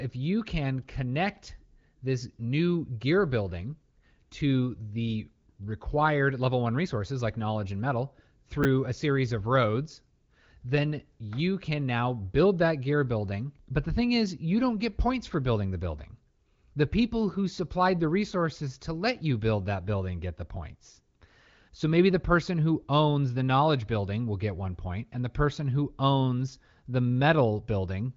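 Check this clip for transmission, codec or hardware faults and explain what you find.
One fault stands out: a brief jumbled flick at 8.63 to 8.65 s, between "like knowledge and metal" and "a series of roads". This is chunks out of order. A 10 ms piece of audio was delivered one chunk late, so it plays after the piece that should follow it. Nothing is missing, but the swapped order leaves three abrupt seams, and those produce the momentary garble. The audio passes through an AMR wideband (HD Voice) codec with nothing above about 7.3 kHz. Codec damage is at most faint, which fits a rate around 18.25 kbit/s.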